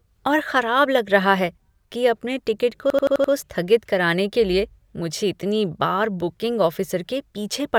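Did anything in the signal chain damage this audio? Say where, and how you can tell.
Yes. A system hang loop damaged the speech at the driver or buffer stage. From 2.90 to 3.33 s, one 85.33 ms slice of audio repeats exactly five times. That gives a stutter at about 11.7 Hz, a machine-gun effect rather than a buzz. The driver stalled, and the hardware kept replaying the same ring buffer. The loop length fits a 4096-sample buffer. The sound resumes after the stall with almost nothing missing.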